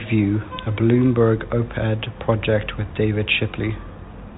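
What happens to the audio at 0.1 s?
Nothing goes wrong at 0.1 s: the speech there comes through intact, carried by its G.711 telephone coding with the usual narrow band that stops below 4 kHz.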